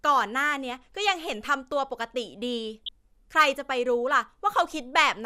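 DAB burbling hits this speech clip from 2.86 to 2.89 s, a brief burst of burbling over the speech. Weak DAB reception let bit errors, at a rate of roughly 0.3 percent, slip past the error correction into the MP2 audio data. Corrupted samples put short blips of noise in single sub-bands, and six frames were hit.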